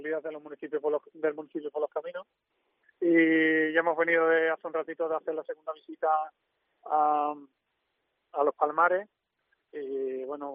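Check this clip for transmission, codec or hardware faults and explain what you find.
Nothing in the way of transmission, codec or hardware trouble turns up here; the audio runs along without a hitch worth pointing to.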